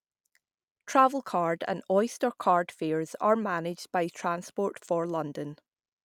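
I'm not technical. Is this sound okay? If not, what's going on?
Yes, this speech sounds fine, and nothing in it points to a technical problem. There's nothing here that needs fixing.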